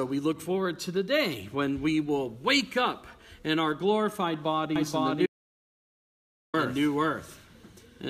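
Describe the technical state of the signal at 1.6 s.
At 1.6 s the signal is intact, with no technical fault audible at that point.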